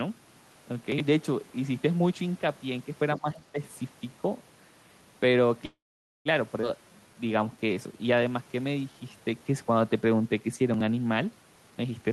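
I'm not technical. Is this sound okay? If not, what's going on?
No. The audio has several faults typical of a phone or internet call.

At 0.92 s and again at 10.74 s you hear a brief jumbled moment. These are chunks out of order. A tiny piece of audio, about 21 ms long, arrived late and played after pieces that should follow it. The first was three pieces late, the second two.

From 3.16 to 3.59 s the speech suddenly dips and partly drops out. This is speech suppressed in double talk. Both sides were likely talking at once, and the echo canceller turned this side down while trying to remove echo.

From 5.65 to 6.28 s the sound stops and then carries on. This is a call audio freeze, likely caused by delayed packets. The receiver waited, filling about 0.6 s, mostly silence, and then resumed from where it stopped. Nothing is lost.

At 6.61 s the audio jumps forward. This is skip ahead. About 0.3 s of speech is missing, and the two sides of the gap are joined almost directly.

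From 6.85 to 9.41 s the speech runs slower but at the same pitch, at about 89% speed. This is jitter buffer slow-down. The receiver stretched the sound to rebuild its reserve, adding about 0.28 s.

From 11.70 s to the end, the speech sounds hurried, at about 134% speed. This is jitter buffer speed-up. The receiver had too much audio waiting, so it cut out tiny slices to reduce the delay.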